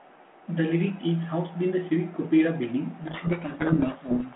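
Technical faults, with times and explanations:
3.02 s to the end at 4.35 s, codec payload misread: the speech abruptly sinks under a harsh, grinding distortion that stays until the clip ends. Before it, the sound is a clean telephone-band signal of roughly 200 Hz to 3.4 kHz that fits G.726 at 32 kbit/s. The decoder starts taking each ADPCM code word with its bits in reversed order, so every step size and difference it rebuilds is wrong.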